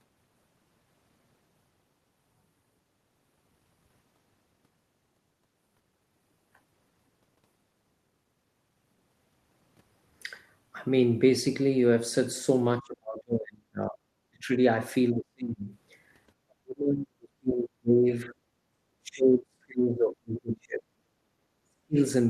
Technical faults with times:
12.79-14.49 speech suppressed in double talk
15.12-15.71 speech suppressed in double talk
16.46-18.34 speech suppressed in double talk
19.00-20.86 speech suppressed in double talk
21.29-21.36 background gated by the echo canceller
21.64-21.97 speech suppressed in double talk

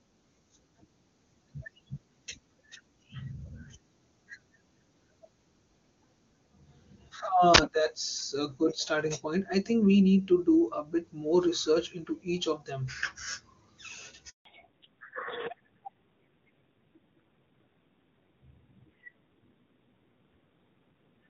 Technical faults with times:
7.54-7.58 uninitialised buffer
14.29-14.45 handover gap
14.45-21.30 fallback to narrowband

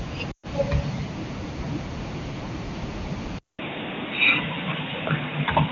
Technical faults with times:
0.31-0.47 lost AMR speech frames
3.39-5.72 input switched to a poorer device

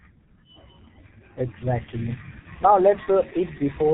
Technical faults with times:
0.00-3.93 G.723.1 codec
2.39-2.47 VoIP packet loss concealed by the speech codec

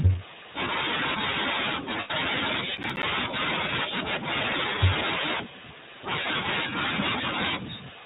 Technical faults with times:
0.00-8.06 iLBC codec
2.00-2.10 lost iLBC frames
2.77-3.03 processor overload crackle

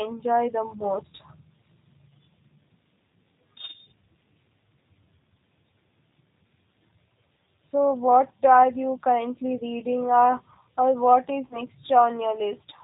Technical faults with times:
0.00-12.83 G.729 codec
11.47-11.58 VoIP packet loss concealed by the speech codec

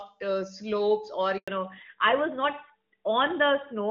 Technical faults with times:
1.38-1.48 handover gap
1.48-3.91 fallback to narrowband

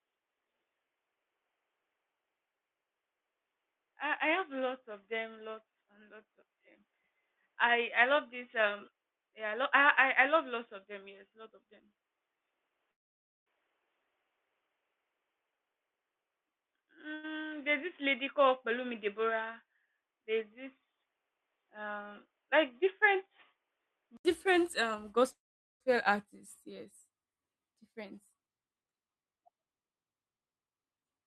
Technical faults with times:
0.00-24.25 input switched to a poorer device
12.91-13.48 call audio freeze
15.56-17.14 jitter buffer speed-up
17.14-17.25 short stall from a late packet
25.33-25.82 call audio freeze
27.93-31.26 jitter buffer speed-up

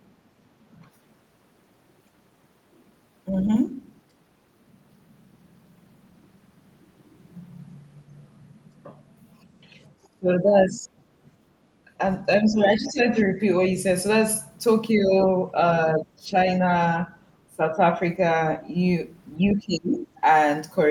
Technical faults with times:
3.42-3.57 other side's voice leaking through
9.61-10.87 speech suppressed in double talk
11.85-11.90 speech suppressed in double talk
12.51-13.77 speech suppressed in double talk
14.94-18.02 speech suppressed in double talk
19.47-20.09 speech suppressed in double talk

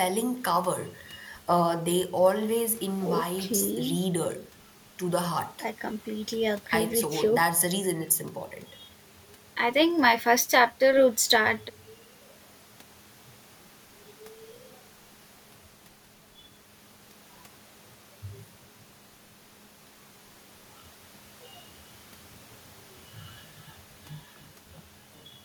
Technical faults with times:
none

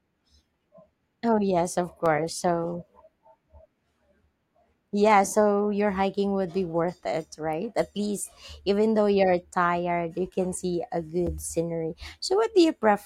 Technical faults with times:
2.06 block of digital silence
11.27 block of digital silence

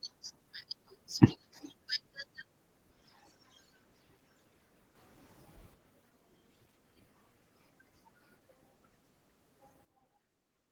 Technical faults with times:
4.95-5.74 sudden gain jump
9.85-10.72 sudden gain jump

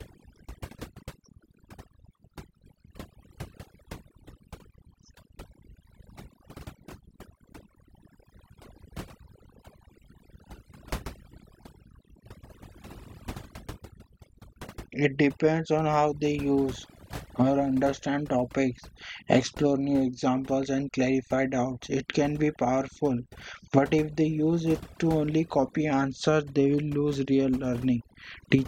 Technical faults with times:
0.00-28.67 overdone noise removal

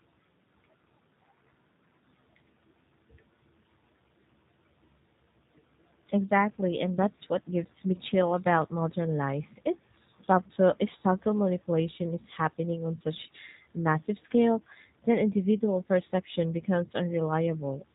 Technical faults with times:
0.00-17.95 G.729 codec

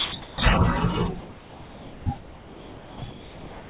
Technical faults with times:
0.00-0.38 sound dropped by the voice detector
1.20-2.06 comfort noise in place of the background
2.18-3.70 sound dropped by the voice detector

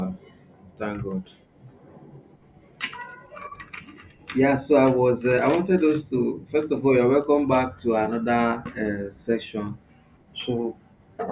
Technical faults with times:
none

